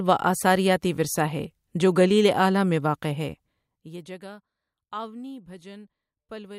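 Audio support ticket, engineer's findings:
Zipper noise, 3.24 to 4.27 s: fine ticking rides on the speech while level falls by roughly 20 dB. Probable component is the gain stage, stepping in 1 dB increments at about 20 steps per second with no ramp. Each unsmoothed jump clicks the waveform.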